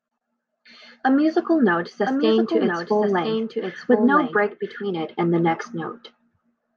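A doubled audio track runs from 2.06 s to 4.84 s: a second copy of the speech sits about a second behind the original and a few decibels quieter. It carries the full frequency range with no decay or room colour, so it sounds like a distinct overlapping replay rather than an echo, and it cuts in and out abruptly at both ends. The likely cause is the audio being captured twice, once through a slower path, or an edit that left two copies out of step.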